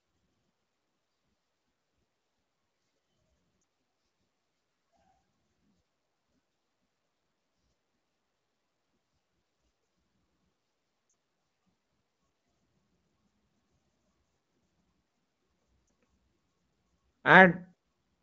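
Speech coded as AMR wideband (HD Voice), with the light coding texture that fits a rate around 15.85 kbit/s, is broken by lost AMR speech frames at 3.61 to 3.63 s, 11.09 to 11.13 s and 15.87 to 15.89 s. The decoder covers each gap by repeating the last good pitch and vocal tract settings at reduced gain, so the first and third (one 20 ms frame) give a brief dip or warble and the two-frame 40 ms loss fades toward near silence. On a spectrogram each shows as a short stretch of flattened, repeated harmonics with weakened energy. The waveform shows a small amplitude dip.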